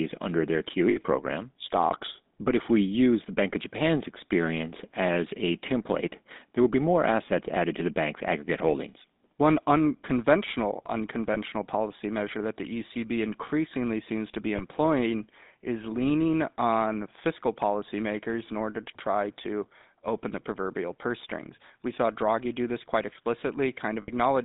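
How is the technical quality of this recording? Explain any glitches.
The recording is limited by a plainly audible GSM full-rate codec throughout, and four short lost-frame glitches.

GSM full-rate codec: Across the whole clip the speech sits in a narrow band of roughly 200 Hz to 3.7 kHz, with nothing above. The codec rebuilds the voice from a vocal-tract filter excited by a sparse, regular pulse train, which fits the 13 kbps full-rate scheme. Because so much of the excitation is discarded, the voice carries a buzzy, gravelly roughness that is clearly audible rather than subtle.

Lost GSM frames: Dropouts occur at 0.90–1.01 s just after "under their", at 11.34–11.37 s just before "policy measure that the", at 14.56–14.61 s just after "increasingly seems to be", and at 24.02–24.10 s. The first and last last about 60 ms, consistent with three consecutive bad frames. The other two last about 20 ms, which points to single frames. 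The decoder fills each gap by repeating the last good frame's parameters, so the sound briefly freezes into a rough, metallic ring instead of going silent.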